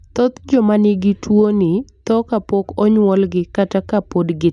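No dropouts, clicks, distortion or other technical faults are audible anywhere in the speech.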